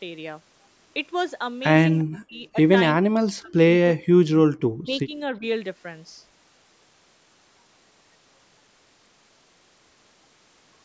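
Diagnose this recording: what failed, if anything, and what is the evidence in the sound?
Echo leak in the call processing: at 1.98 s a short, faint copy of the sound comes back about 347 ms late, sitting roughly 30 dB under the main level. That's likely the echo canceller on the far end letting a scrap of loudspeaker pickup slip through.

Right after that, speech suppressed in double talk, also in call processing. The speech drops by around 40 dB at 2.03–2.56, 2.98–3.63, 3.93–4.32 and 4.72–5.12 s, plus a shallow 10 dB dip near 5.4 s. The canceller likely couldn't separate talker from echo, so it ducked both.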